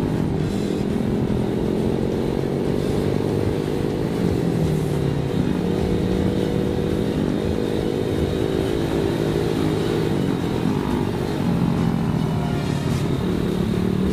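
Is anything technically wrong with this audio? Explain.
No, nothing technically wrong can be heard in this audio. No faults show up at any point in the recording.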